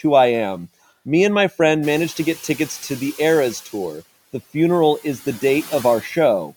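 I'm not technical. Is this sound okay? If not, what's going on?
No. At 1.82 s, just after "and my", the room noise jumps up. The noise suppressor catching up lets it through at first, then fades it down by 3.61 s.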